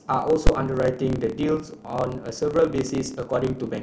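Block size mismatch (truncated) runs through the whole speech clip. One stage hands over longer blocks than the next stage takes in, so the tail of every block is lost. This leaves a buzz at about 36.3 Hz and speech running 1.09 times fast with its timbre kept.

Invalid numbers at full scale strike at 0.47 s. A calculation produced infinite or invalid values, which were forced to the largest positive or negative value. The output is pinned at one extreme value, far beyond the speech's peaks, for a burst short enough to fit a 256-sample block, heard as one very loud bang.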